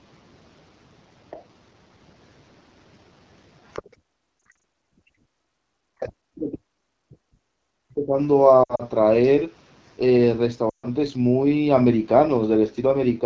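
A speech recording carried over an AMR wideband (HD Voice) codec, and the codec damage is plainly audible for the whole clip. Speech sounds rough and raspy, with a noise-filled top band reaching up to about 7 kHz, which fits the 8.85 kbit/s mode, one of AMR-WB's two lowest rates. That raspy, buzzy texture from its pulse-driven model sets it apart from the swirly, watery smearing of a transform codec. The call microphone processing trims the lowest bass, and nothing reaches above 8 kHz. From 1.30 to 1.45 s and again from 3.68 to 3.82 s, faint scraps of a second voice appear, about 20 dB and then about 15 dB below the main talker. This is the other side's voice leaking through, likely loudspeaker sound the echo canceller failed to remove. Unlike crosstalk on a line, these scraps come in short bursts rather than as a steady undercurrent. From 3.85 to 5.41 s the background is gated by the echo canceller. 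The room sound drops by as much as about 40 dB over roughly one and a half seconds while the canceller clamps the microphone, then comes back. What marks this as gating is that the ambience itself vanishes, while the talker's speech is not what gets cut. Lost AMR speech frames occur at 4.52 s, 8.64 to 8.83 s and 10.69 to 10.86 s. In the first, about 120 ms of audio is missing, scattered over 240 ms in runs no longer than 40 ms. In the second, about 100 ms is missing across 160 ms, with a 60 ms run. The third loses about 140 ms. Each gap is bridged by the decoder repeating its last good settings at falling gain, so the sound warbles or smears and fades rather than cutting cleanly, and then returns rough for a moment. That smeared fade separates frame loss from a hard dropout. From 5.69 to 8.15 s the talker's own speech dips for roughly two seconds, at worst around 40 dB down. This is speech suppressed in double talk, most likely the canceller turning everything down while both sides spoke. 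Here it is the talker's voice that dips, where the earlier gating took out only the room sound.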